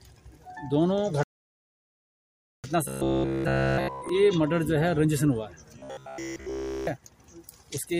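At 1.23 s the audio drops into a rebuffering stall: the player has run out of downloaded data and halts until more arrives, so silence holds until 2.64 s, adding about 1.4 s to the running time. When sound returns it picks up exactly where it broke off. On a waveform this is a flat line with clean edges on both sides, and on a spectrogram it is an empty vertical band across all frequencies.

From 2.88 to 4.09 s, and again from 5.79 to 6.87 s, the sound turns into a hard, metallic buzz with a fixed pitch of 66.8 Hz that only loosely tracks the underlying audio. This robotic sound from repeated short buffers likely comes from data arriving too seldom, with the software repeating a snippet of about 15 ms in place of essentially all the real audio. A spectrogram shows evenly spaced horizontal harmonic lines at multiples of 66.8 Hz, and the waveform shows the same short shape repeating over and over.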